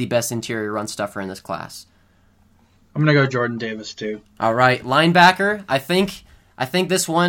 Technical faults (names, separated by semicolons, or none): none